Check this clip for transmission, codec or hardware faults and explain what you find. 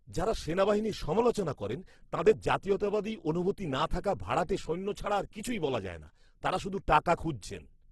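One codec fault affects the whole clip. The speech sounds rough and grainy throughout, with noisy texture replacing clean tone, and nothing above 12.1 kHz. This is likely Opus compression in its music mode, which at a rate near 12 kbps keeps band energies but fills starved bands with noise.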